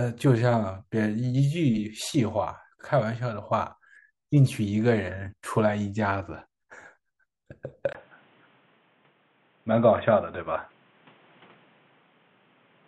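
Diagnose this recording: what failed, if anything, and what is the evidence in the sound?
The input likely switched to a poorer device at the driver stage: after a 20 ms gap at 7.93 s, speech loses everything above 3.8 kHz and gains a faint new noise floor.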